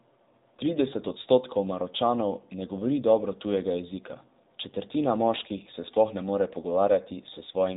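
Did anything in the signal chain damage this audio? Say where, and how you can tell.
Yes. Across the whole clip the speech sounds thin, boxy and buzzy, with a plainly audible synthetic edge, and nothing is left above about 3.8 kHz. That points to the codec stage: an AMR narrowband mobile codec. It samples at 8 kHz and rebuilds the voice from a vocal-tract model excited by a few pulses per 5 ms subframe. The strong buzz suggests one of the lower modes, around 7.4 kbps.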